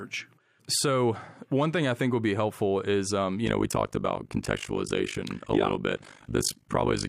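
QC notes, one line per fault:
3.46–7.08 s, overlap-add ripple: after "helpful is um you", level pumps about 60 dB once per frame, around 50 Hz, giving a metallic buzz.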